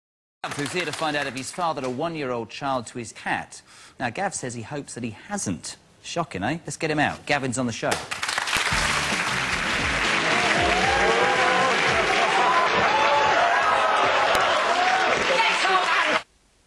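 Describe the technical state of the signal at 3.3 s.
The signal is intact at 3.3 s, with no audible fault at that moment.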